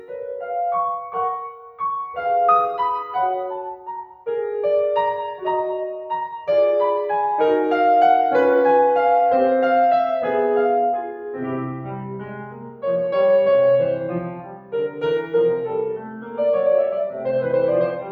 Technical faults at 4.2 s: noise suppressor applied to music or sounds; sound cut by the noise suppressor

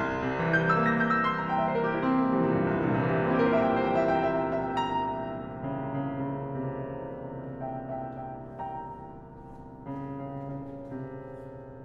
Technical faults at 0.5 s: none

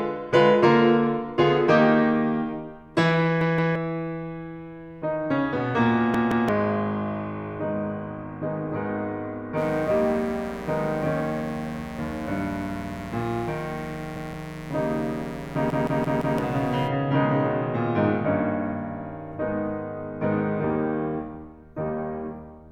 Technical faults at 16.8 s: mains buzz

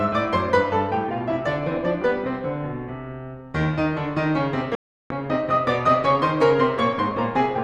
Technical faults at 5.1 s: digital broadcast dropout

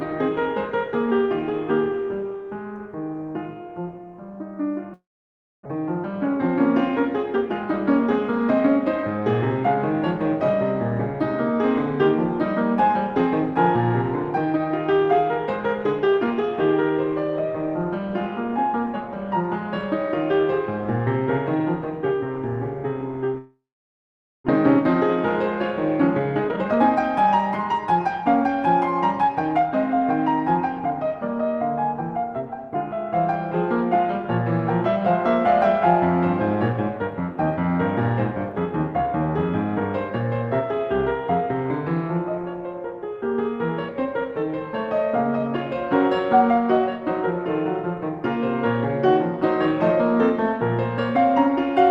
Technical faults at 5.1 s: long network dropout

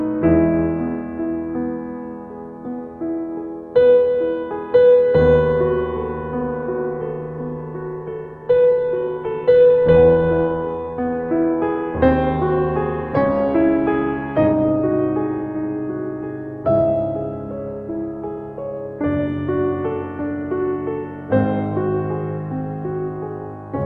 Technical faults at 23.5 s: none

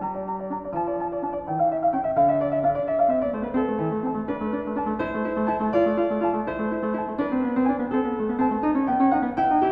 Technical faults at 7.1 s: wrong sample rate

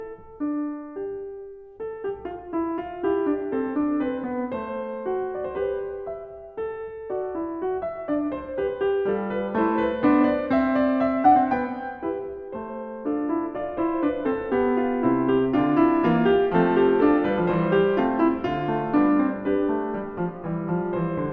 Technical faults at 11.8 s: none

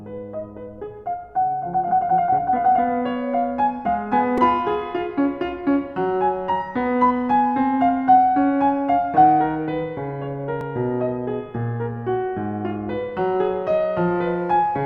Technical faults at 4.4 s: repeated buffer

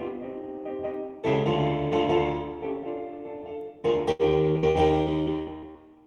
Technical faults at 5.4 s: channel delay (comb filtering); repeated packet loss (robotic sound)

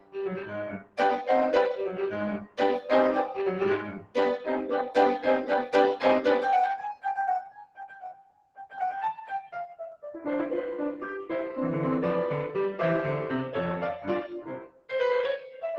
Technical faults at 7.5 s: noise suppressor applied to music or sounds; sound cut by the noise suppressor

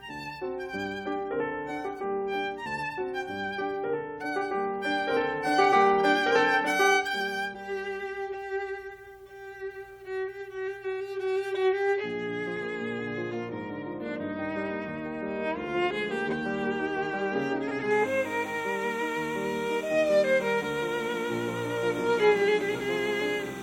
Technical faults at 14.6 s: none

